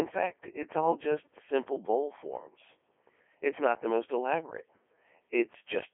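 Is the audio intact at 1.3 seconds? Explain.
No. At 1.3 seconds, as throughout the clip, the speech sounds robotic and buzzy, squeezed into a narrow 300 Hz to 3.4 kHz band with nothing above 3.7 kHz. This is the Codec 2 vocoder, heavily damaging, consistent with its 3.2 kbit/s mode: only pitch, voicing, energy and spectral envelope survive, and the voice is rebuilt from sine waves.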